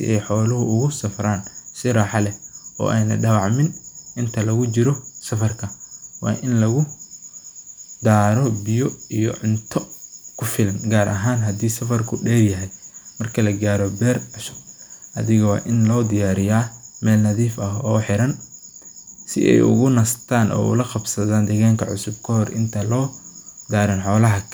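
No audible technical faults here.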